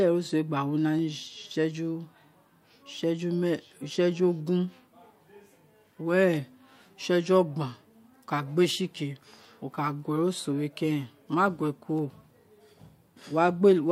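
Sharp single clicks cut through the speech at 0.99 s, 8.65 s and 11.99 s, each a thin vertical line across the spectrum. These are likely dropped samples: around a tenth of a millisecond goes missing, so the waveform jumps abruptly. Unlike a dropout, no audible sound vanishes.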